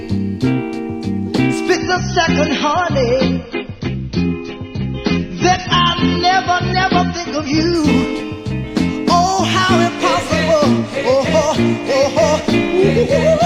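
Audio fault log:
1.75–7.75 s: adaptive stream at a lower bitrate. At 1.75 s the sound abruptly turns dull and thin, with nothing above 6.3 kHz, and a swirly, smeared texture of codec artefacts appears. At 7.75 s the full brightness snaps back, with no gap at either switch. The player likely fell back to a lower-bitrate rendition while the connection slowed, and the cutoff and artefacts fit a step from about 96 kbit/s AAC down to 24 kbit/s.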